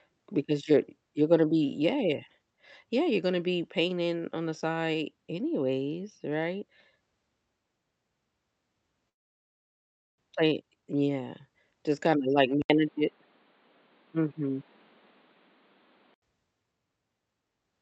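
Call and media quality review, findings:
Speech drops out 9.09 to 10.24 s, fading fill then near-silence, about 1 s of audio gone; likely a long network dropout, receiver concealment running out.

Jitter buffer speed-up 10.42 to 11.19 s: speech plays about 10% fast at unchanged pitch, roughly a tenth of a second trimmed as buffer drains backlog.

After "just kinda like", 80 ms gap at 12.62 s, then dull band-limited sound with nothing above 4.7 kHz, a few dB level shift and faint added noise until 16.22 s; likely input switched to a poorer device.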